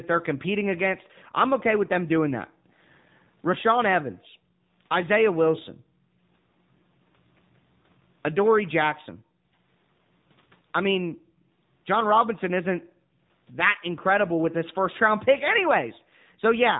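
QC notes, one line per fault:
Throughout: AMR narrowband mobile codec, nothing above 3.8 kHz, plainly audible buzzy synthetic speech from a pulse-driven vocal tract model, which fits a 7.4 kbps bitrate.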